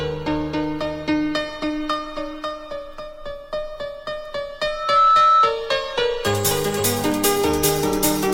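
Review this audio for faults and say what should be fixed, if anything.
A piercing single tone at 1.3 kHz swells up from 4.66 s, reaching full strength within roughly a third of a second and sitting around 10 dB above the rest of the audio until it stops at 5.58 s. This is loudspeaker feedback squeal: the microphone was hearing its own loudspeaker, and at 1.3 kHz the loop gain passed one, so that tone fed on itself and kept growing. Prevent it by lowering monitor gain, moving the microphone away from the loudspeaker, or notching 1.3 kHz.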